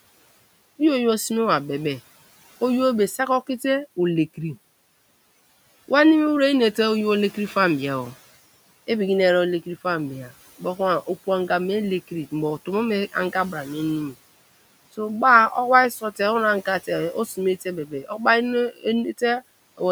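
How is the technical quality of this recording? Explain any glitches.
Two short glitches occur near the end, against room noise sitting about 22 dB below the speech. Speech cut by the noise suppressor occurs at 17.88–18.2 s and 18.71–18.85 s: the suppressor misread speech as noise and pulled it down by about 10 dB and about 15 dB, leaving brief stretches swallowed and faint.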